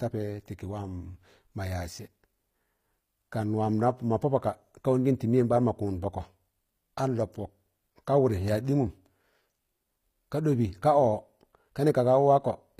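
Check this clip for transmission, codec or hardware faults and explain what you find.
There's one codec fault, and it runs through the whole clip: the treble sounds plainly like HE-AAC compression, likely at a low rate. The top end is synthesised from copied lower bands and nothing comes through above about 15.5 kHz, so s sounds come out gritty and metallic, which fits a stream around 24 kbps.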